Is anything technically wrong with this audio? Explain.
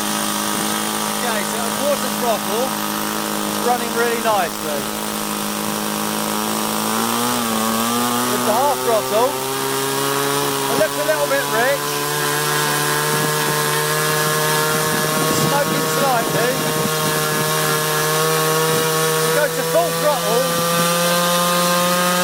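Yes. Low bit depth without dither runs through the whole clip. The audio was likely rounded to very few levels with no dither, which fits a 4-bit signal. The error tracks the signal and sits only around 10 dB below it. It sounds like grainy distortion or a near-steady hiss.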